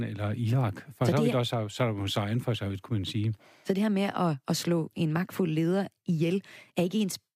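Nothing here stands out as a technical fault, so the speech can be heard without anything to point to.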